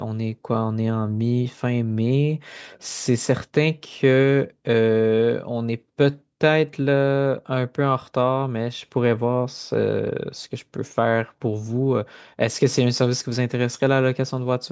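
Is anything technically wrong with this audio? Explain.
No, nothing is technically wrong with this speech recording. It has passed through a call's microphone processing, which trims the lowest bass and leaves nothing above 8 kHz, as that processing normally does.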